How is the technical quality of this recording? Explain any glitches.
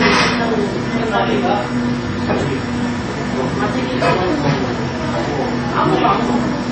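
Throughout the recording the audio sounds dull: nothing reaches above about 8.3 kHz, and the remaining detail carries several kinds of compression damage layered on top of one another. The likely cause is transcoding between lossy codecs, with the sound passing through a chain that ends in Vorbis. The character fits a very low-rate MP3 stage followed by AAC-LC and then Vorbis at a similarly low rate. Each later encoder wasted bits reproducing the earlier encoder's artefacts and then added its own. The 8.3 kHz ceiling comes from the most restrictive stage in that chain, and none of the later stages could recover what it had already removed.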